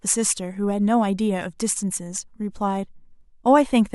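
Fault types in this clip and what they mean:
No audible faults detected.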